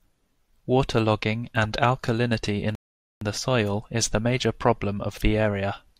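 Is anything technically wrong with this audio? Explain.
Yes. A rebuffering stall runs from 2.75 to 3.22 s: playback drained its downloaded audio and waited for more, inserting about 460 ms of silence. Unlike a dropout, the speech resumes exactly where it halted, with nothing skipped, just delayed.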